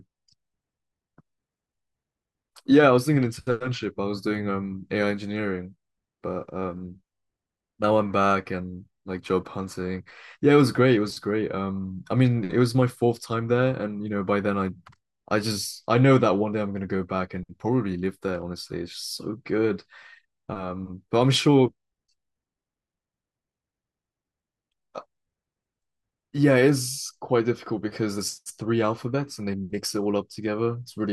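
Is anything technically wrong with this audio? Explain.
No, nothing is technically wrong with this audio.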